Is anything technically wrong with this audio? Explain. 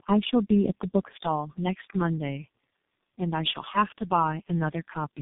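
Yes. Tandem speech coding runs through the whole speech clip: the signal sounds like it was decoded and re-encoded by about three low-rate speech codecs in a row, likely AMR-NB-style coders feeding a final G.723.1-type stage, with plain telephone-band links between them. Each coder models speech that the previous one already damaged, so errors compound. The result is rough, muffled and warbly speech with nothing above 3.7 kHz.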